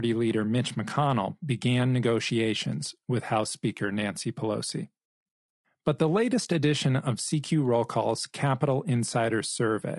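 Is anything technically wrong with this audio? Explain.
Yes. Throughout the speech it sounds rough and grainy, with noise between harmonics, likely low-delay AAC compression whose short frames blur pitch detail, consistent with roughly 32 kbps.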